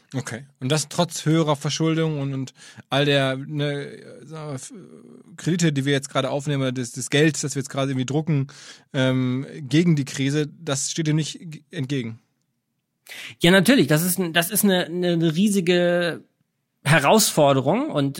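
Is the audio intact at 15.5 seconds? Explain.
Yes, at 15.5 seconds the speech plays through intact with no audible fault.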